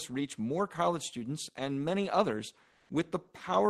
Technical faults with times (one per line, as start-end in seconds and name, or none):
2.71-2.87 comfort noise in place of the background